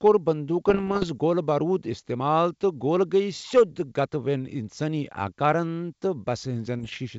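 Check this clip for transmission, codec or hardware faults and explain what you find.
Two short stretches of bit errors on an ADPCM link appear in the speech. From 0.69 to 1.09 s and again from 6.79 to 6.99 s, flipped bits, under one percent, corrupt the decoder's step size and predictor, so each error rings briefly as pops, rough bursts and momentary level jumps. The wideband coding carrying the speech, which fits G.722, adds at most a faint upper-band hiss.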